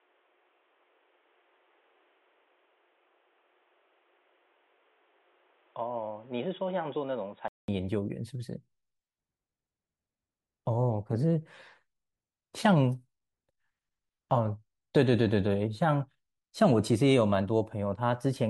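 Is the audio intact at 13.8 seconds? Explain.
Yes, the speech at 13.8 seconds plays through intact, with no audible fault at that moment.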